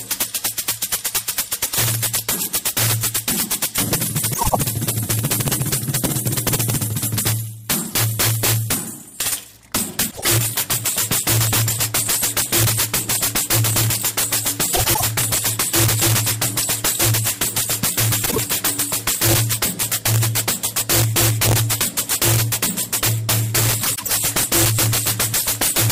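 Violent cracks burst out of the loudest moments all through the clip, far harsher and sharper than ordinary clipping. This is integer overflow: the level was pushed about 12 dB past full scale, and instead of being limited, the peaks that exceeded the largest integer value wrapped around to the opposite sign. Each overshooting sample jumps across the whole range. Only a small share of samples, roughly 4 percent, go over, so the damage lands on the peaks.

Five short stretches break into a garbled flutter, at 4.33–4.56 s, 10.10–10.29 s, 14.73–15.01 s, 18.25–18.38 s and 23.84–24.12 s. These are frames out of order. In each stretch, two adjacent blocks of audio play with their positions exchanged. The swapped blocks are about 78, 52, 105, 26 and 105 ms long, which fits whole frames of about 26 ms. No time is lost.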